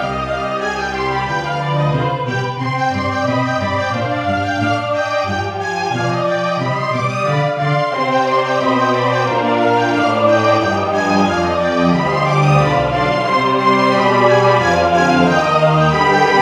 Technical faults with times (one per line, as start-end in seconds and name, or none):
none